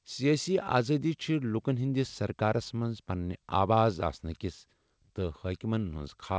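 No faults are audible in the speech; it has passed through a wideband call path with nothing above 8 kHz, which fits a G.722 codec.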